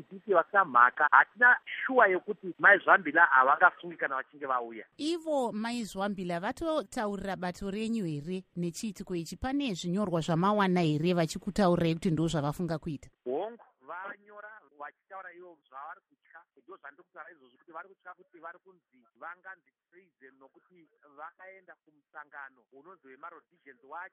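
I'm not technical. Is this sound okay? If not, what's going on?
Yes, this one sounds fine, with nothing here that needs fixing.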